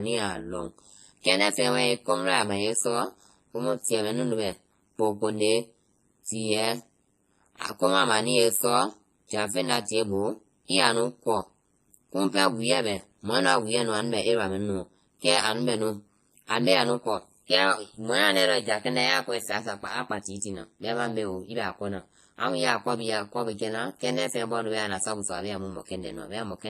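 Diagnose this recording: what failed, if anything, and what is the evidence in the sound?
Codec stage, throughout the speech: washy ringing and a hiss that breathes with the voice. This is likely heavy WMA compression at a bitrate around 24 kbps.

Overlap-add ripple, throughout: the level dips by about 60 dB roughly a hundred times a second, giving a metallic buzz with extra tones around the voice. Frame-based processing rejoined windows whose overlap doesn't sum to constant gain.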